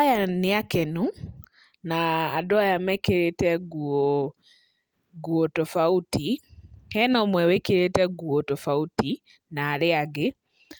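No technical faults can be heard anywhere in this speech recording. There is nothing in the sound to point to a problem at any stage of how it was captured or passed along.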